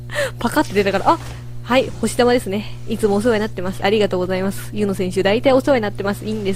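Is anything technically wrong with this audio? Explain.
Yes, mains hum runs throughout: power-line interference, likely from a ground loop, adds a steady 60 Hz drone about 15 dB below the signal, seen as a constant horizontal spectrogram line.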